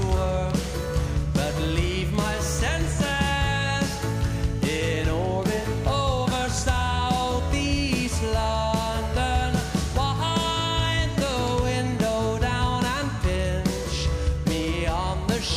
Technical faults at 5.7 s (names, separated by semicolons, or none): none